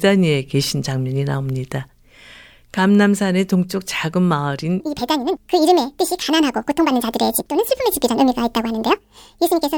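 Speech recording with a section at the wrong speed from 4.80 s onward, running 1.76 times fast and roughly ten semitones high, likely from a clock mismatch.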